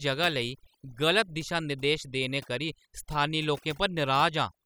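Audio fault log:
Throughout: overdone noise removal, where noise reduction set too strong silences bands near the noise estimate, leaving a lowered background that breaks up into twinkling specks.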